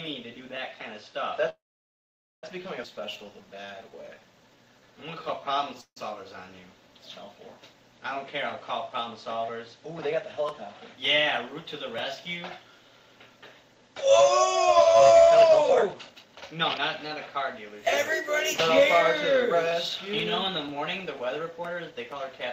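From 1.49 to 2.44 s there is a call audio freeze. The last sound is stretched into a brief fading buzz, then about 860 ms of silence. This likely comes from packets held up in transit until the jitter buffer ran dry. Playback resumes where it stopped, with 935 ms inserted and nothing lost. A shorter freeze at 5.81 to 5.97 s inserts 156 ms, 90 ms of it silent.

At 2.84 s a skip ahead drops roughly half a second of audio. The material on either side is butted together almost seamlessly, so the listener hears an abrupt jump rather than a gap.

From 2.94 to 5.75 s a jitter buffer slow-down plays the audio at 85% speed. Pitch periods are repeated to rebuild the buffer reserve, adding 418 ms. The sound drags and is drawn out, though pitch is unchanged.

Jitter buffer speed-up follows as the buffer sheds excess delay by cutting out pitch periods. The strongest pass runs from 15.29 to 18.34 s at 124% speed, removing roughly 0.7 s, and sounds noticeably hurried. 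Milder passes at 18.79 to 20.10 s (104%) and 21.26 to 22.10 s (106%) each remove roughly 50 ms.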